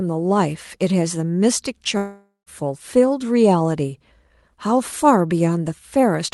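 At 1.97 s the speech breaks off for about half a second, until 2.49 s. It sounds like a long network dropout, likely where nothing arrived for that stretch. The receiver stretches the last bit of sound into a buzzy tail that fades out, leaving about 140 ms of near silence. Then the audio picks up again, already moved on, with roughly 500 ms simply gone. Around it, the call-codec sound tops out near 12 kHz.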